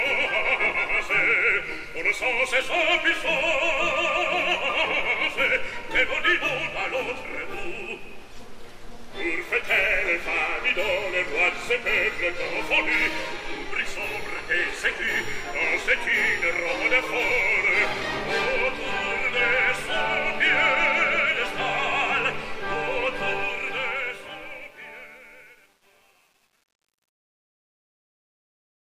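The fade-out over the last few seconds, starting around 23.3 s, shows truncation distortion on a fade from 23.33 s to 28.87 s. With no dither, the dying level collapses into coarse steps, worst from 24.21 s on, where it turns gritty, which fits a path keeping only about 9 bits.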